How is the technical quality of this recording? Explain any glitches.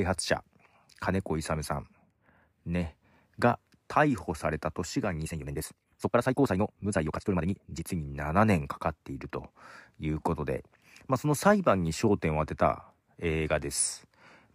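The recording has one clear fault, a time-stretched section in the middle of the speech.

From 5.21 s to 7.83 s the pace jumps to roughly twice normal speed, 1.97 times, while pitch stays unchanged. The likely cause is software compressing that stretch to fit a shorter duration, holding pitch by discarding short slices of the waveform. Removing so many slices makes the passage sound rushed, before the pace drops back abruptly at 7.83 s.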